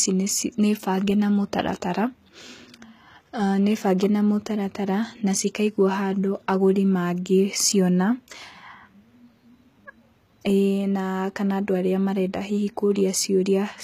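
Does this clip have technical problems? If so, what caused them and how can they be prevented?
Yes. HE-AAC compression throughout: the treble up to 14.9 kHz is plainly rebuilt rather than original, with gritty, lispy sibilance, likely from band replication at a low bitrate around 20 kbps. Encode at a higher bitrate or with plain AAC.

Pre-echo at 12.95 s: an 11 ms hiss precedes the attack, where the transform block spread quantisation noise ahead of it. Use a higher bitrate or a codec with shorter transient blocks.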